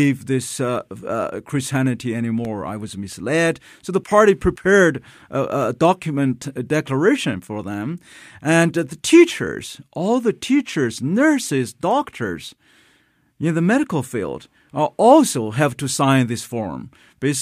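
From 2.23 to 3.35 s the speech carries CD scratch ticks: six brief clicks, about five per second, where a blemish defeated error correction on each disc rotation and the player patched the gap. The longest lasts about 2 milliseconds, and they show as thin vertical lines on a spectrogram.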